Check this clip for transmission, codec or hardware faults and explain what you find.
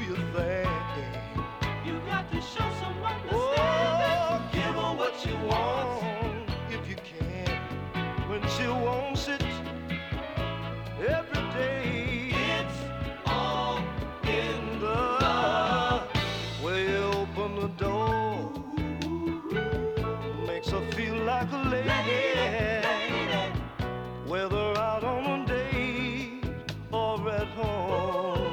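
No transmission, codec or hardware faults turn up anywhere in this clip.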